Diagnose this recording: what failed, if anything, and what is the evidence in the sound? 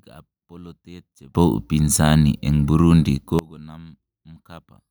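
At 1.35 s the speech and the background noise jump together by about 24 dB, stay at that raised level, and then drop back just as abruptly at 3.39 s. Because the noise floor rises in step with the speech, this is a sudden gain jump in the digital chain. The level changes between one sample and the next, most likely from a gain setting or bit shift in the processing stage being applied and later removed without any ramp.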